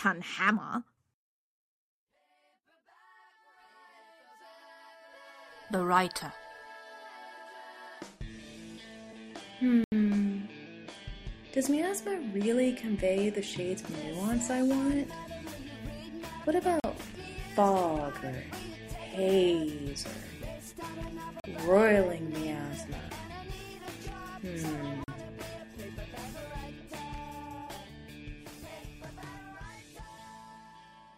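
The audio drops out to digital silence four times. Each time a block of digital silence replaces the sound. The first gap runs 80 ms, from 9.84 to 9.92 s. Three shorter 40 ms gaps follow, at 16.80, 21.40 and 25.04 s. The sound cuts out and returns with no fade. The cause is zeroed samples, most likely an output buffer that was not filled in time.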